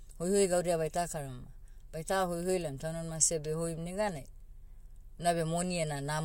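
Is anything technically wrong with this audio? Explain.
No, nothing technically wrong can be heard in this speech recording. There is no audible fault anywhere in the clip.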